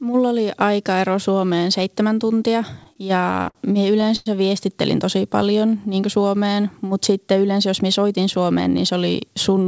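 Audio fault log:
2.84–3.57 s and 4.01–4.28 s, repeated stalls (stutter): after "seitsemän tuntia", late packets emptied the jitter buffer twelve times. Gaps up to 98 ms were filled by stretching the last sound, so the audio drags and stutters.
5.16–5.80 s, jitter buffer slow-down: before "niin kuin", the receiver repeated pitch periods to rebuild its reserve, adding 72 ms. Speech plays at 90% speed with unchanged pitch.
7.69–8.93 s, jitter buffer speed-up: after "mutta sitten yleensä", excess buffered audio was trimmed by dropping pitch periods, about a tenth of a second in all. Speech runs at 108% and sounds hurried.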